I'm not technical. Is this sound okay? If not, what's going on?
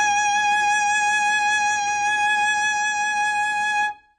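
No. The music has a problem from start to finish. Nothing above about 9.6 kHz is present, so the top end sounds dull and muffled. Held notes and hissy sounds have a warbly, fizzy texture, and detail is smeared. The likely cause is heavy AAC compression. This kind of encoding throws away what it judges you won't miss. When it is squeezed this hard, it cuts the highs and leaves gaps in the sound.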